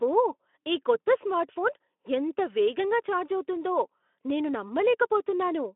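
No technical faults turn up in this speech, which comes through a Speex-coded telephone-band channel of about 250 Hz to 3.5 kHz that is working as intended.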